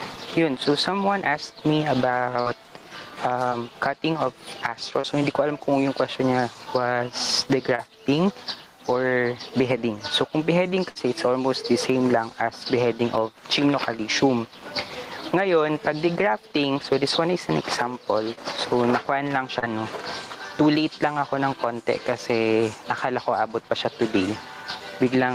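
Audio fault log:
throughout: gain pumping. The gain swings by about 15 dB under loud sounds. Likely excessive gain with a fast limiter squashing dynamics.
2.41–2.47, 3.49–3.53, 5.01–5.05, 7.75–7.80, 18.35–18.39, 19.59–19.64: short concealed packet loss. Between 20 and 40 ms of audio went missing each time. The receiver extended the preceding sound, leaving brief smears or wobbles.
10.90–10.97: burst of packet loss. About 60 ms never arrived. The receiver stretched the last sound into a fading buzz or hiss, then resumed further on.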